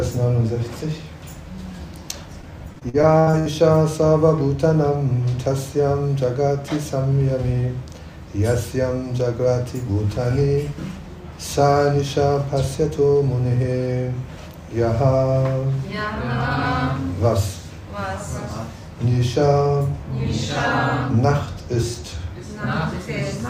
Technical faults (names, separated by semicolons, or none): repeated packet loss (robotic sound)